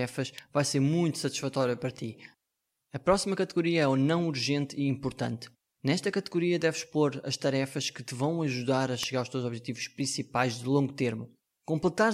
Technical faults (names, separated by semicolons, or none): electrical switching spike